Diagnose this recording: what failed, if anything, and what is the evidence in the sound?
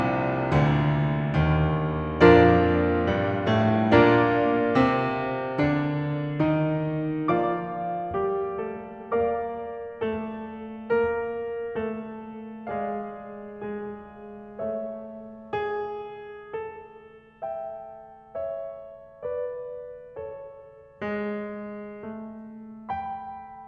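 Nothing failed; no fault is audible anywhere in the music.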